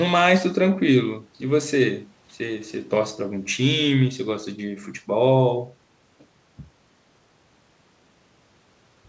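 The clip is speech carried over a call path with a wideband codec that leaves nothing above 8 kHz, and nothing is technically wrong with it.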